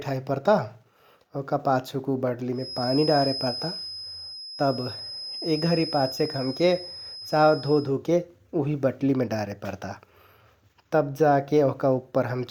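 From 2.50 s to 7.94 s a feedback whistle sits behind the speech: a thin, steady tone at 5.1 kHz, roughly 10 dB below the voice, swelling and fading slowly in level. The likely cause is a loudspeaker-to-microphone loop held just at the edge of feedback, so one frequency keeps ringing without building. Unlike runaway howl, it never swells toward overload, and unlike mains hum it is a single high pitch rather than a low buzz.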